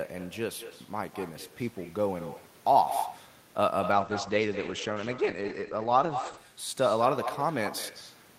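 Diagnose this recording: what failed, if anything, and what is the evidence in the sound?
Throughout the speech, every phrase is trailed by a quieter, thinner copy arriving around a fifth of a second later, about 11 dB below the direct sound. This is echo with no canceller, a call-processing failure. The far end is playing the call through a loudspeaker, its microphone picks that playback up, and no echo canceller subtracts it, so the talker's own voice returns after the network round trip.

From 3.96 s to 6.49 s the speech turns rough and muffled. Its top end collapses from full range to a ceiling near 8 kHz, and coarse, watery artefacts appear before clarity returns. This is a call bitrate drop at the codec stage. The sound fits an encoder that was pushed from about 48 kbps down to about 12 kbps after the bandwidth estimate fell, and it stayed at that floor for roughly 2.5 s. At that rate the encoder quantises coarsely and band-limits its output.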